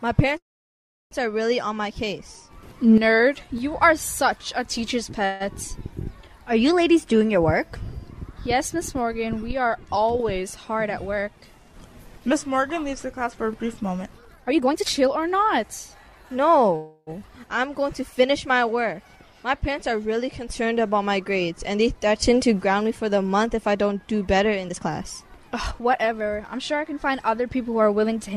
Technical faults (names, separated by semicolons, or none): call audio freeze; jitter buffer speed-up